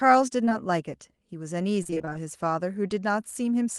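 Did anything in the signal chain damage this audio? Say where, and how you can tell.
Yes, at the network stage. At 0.45 s and again at 0.49 s there is short concealed packet loss: two consecutive 20 ms chunks of speech failed to arrive, and the decoder bridged each by extending the preceding sound for about 17 ms before crossfading back. Together they run from 0.45 to 0.53 s as a brief smear with a wobble.

From 1.83 to 2.17 s there is repeated packet loss, which gives the robotic sound. Nine separate gaps fall inside that third of a second, the longest 24 ms, and about 47% of the span is synthesized rather than received. The concealment loops the last waveform over and over, with each patch followed soon by the next gap, so the speech turns choppy. The Opus call path itself, band-limited at 12 kHz, is not what causes this.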